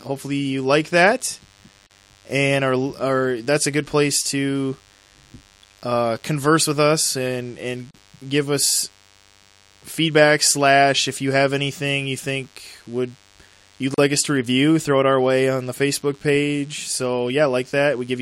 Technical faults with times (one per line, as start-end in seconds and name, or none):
0.00-18.21 DECT cordless phone buzz
1.87-1.91 gap at a join of encoded pieces
7.91-7.94 gap at a join of encoded pieces
13.94-13.98 gap at a join of encoded pieces